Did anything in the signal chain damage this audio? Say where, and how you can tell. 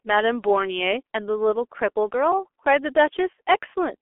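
Yes. Throughout the clip the speech sounds muffled and hoarse, with consonants smeared into one another and no energy above about 3.6 kHz. The band sits roughly between 300 Hz and 3.4 kHz, like a phone line. This is G.723.1 codec damage at the codec stage. The coder works in 30 ms frames and updates its voice model slowly, so fast transitions blur. The very coarse texture fits a bitrate of about 6.3 kbit/s.

From 0.11 s to 0.59 s a crackle rides on the louder parts of the speech. This is hard clipping at a converter or gain stage. The signal was driven about 3 dB past what that stage could pass, so the waveform peaks were cut flat. The flattened tops add high harmonics that the speech itself does not contain, and those harmonics are the crackle you hear on each peak during that half-second.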